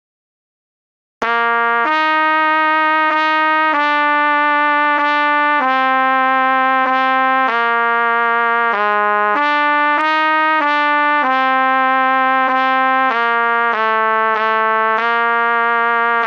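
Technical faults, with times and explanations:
Throughout, gain pumping: the level swings roughly 25 dB, pulling loud and soft parts closer together and squashing the sound, likely from overdriven gain feeding a fast limiter.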